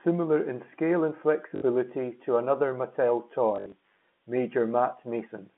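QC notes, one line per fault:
1.56–1.62 s and 3.56–3.72 s, packet loss with last packet repeated: after "in scale and", 60 ms is filled by replaying the previous packet; later, 100 ms of gaps scatter across 160 ms. Repeats ignore the pitch cycle, so runs buzz near 50 Hz, fitting 20 ms packets.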